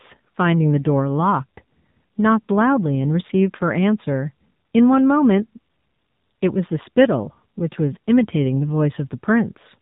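From start to finish the speech carries AMR narrowband mobile codec damage: nothing above 3.8 kHz survives, and the low-rate vocal-tract modelling, which fits roughly 7.4 kbps, leaves a plainly buzzy, synthetic quality.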